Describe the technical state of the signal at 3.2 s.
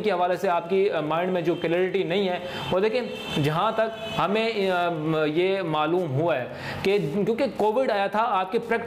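At 3.2 s the signal carries Wi-Fi interference, which runs through the whole clip. A nearby Wi-Fi radio's beacon, repeating every 102.4 ms, is picked up and rectified by the audio circuit, producing a steady ticking close to ten times a second, sitting roughly 35 dB below the signal. On a spectrogram it shows as thin, evenly spaced vertical broadband lines; on the waveform, as small regular spikes about 0.1 s apart.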